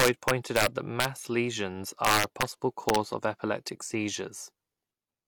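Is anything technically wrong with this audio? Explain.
Yes. The speech has integer overflow from 0.00 to 1.05 s and 2.05 to 2.42 s, pushed about 4 dB past full scale, and from 2.89 to 2.96 s, about 1 dB over, just before "for epileptic". Instead of being limited, peaks wrap to the opposite sign and produce harsh cracks sharper than clipping.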